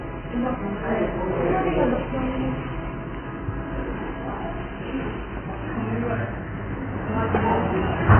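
From start to finish the sound is dull and muffled, with nothing above about 3.1 kHz and a smeared, warbling texture. It's likely heavy AAC compression, with AAC-LC at a very low bitrate, around 12 kbps, pulling the cut-off down and starving the remaining bands of bits.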